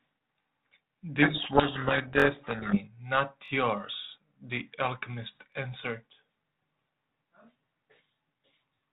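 Repeated buffer at 0.43 to 0.45 s: playback ran short of fresh audio, so the device replayed the last 21.33 ms block once, which fits a 1024-sample buffer. It is heard as a brief stutter with a hard join, and nothing seems to be missing afterwards.

Codec payload misread from 1.22 to 2.80 s: the bit order of the G.726 code words was swapped between sender and receiver, so the decoder built its output from scrambled values. The speech sinks under harsh, grinding distortion until the packing agrees again. Outside this stretch, the 32 kbit/s G.726 path carries the speech band-limited below 4 kHz.

Repeated buffer again at 2.20 to 2.24 s, inside the garbled stretch, and at 3.46 to 3.50 s, each time with the same 21.33 ms block played twice more, giving a triple stutter. A final single repeat at 5.53 to 5.55 s gives one more short stutter.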